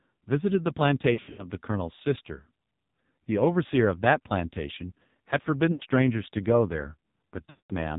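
The whole clip is speech run through the AMR narrowband mobile codec, and it's badly damaged. Nothing above 4 kHz survives, so it sounds boxy and phone-like. The buzzy, synthetic edge fits one of the low AMR-NB modes, around 5.9 kbps. At that rate the codec rebuilds the voice from a vocal-tract model fed by very few pulses per frame, so a lot of the natural texture is replaced by coarse approximation.

On top of that there are lost AMR speech frames in three places. From 1.14 to 1.46 s the gaps are scattered rather than one solid hole, with about 200 ms missing in total and the longest run around 80 ms. You get a stuttery warble as the decoder keeps reusing the last good pitch and vocal-tract settings at falling gain. At 5.72 to 5.83 s there's a short, smeared dip of about 80 ms. From 7.50 to 7.73 s a solid stretch of about 200 ms goes missing. The sound drags out, fades toward silence, and comes back rough.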